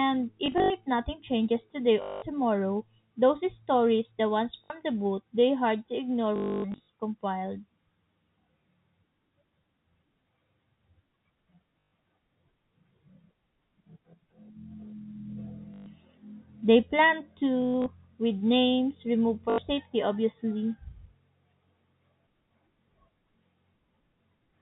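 At 0.46, 2.02, 4.64, 6.36, 11.8, 15.74, 17.62 and 19.5 s, packet loss with last packet repeated makes robotic stutters buzzing near 50 Hz, which fits 20 ms packets. The longest run is at 6.36 s, about 0.28 s.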